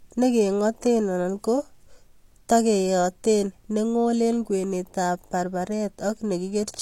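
A short speech recording with low-bitrate audio saved at a high bitrate throughout. A spectrogram shows a flat ceiling at 16.3 kHz with the first encoding's artefacts still present, likely from a low-rate HE-AAC source re-encoded as high-rate MP3.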